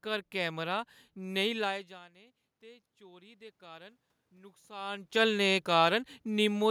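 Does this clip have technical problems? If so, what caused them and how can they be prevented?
Yes. Automatic gain rising, from 2.12 to 5.14 s, just after "घर कैमरा नेईं लाए": the input fell by about 24 dB, so the gain control slowly added about 7 dB, lifting the voice and room noise together. Fixing the microphone gain manually, or keeping a steady distance from the microphone, prevents this.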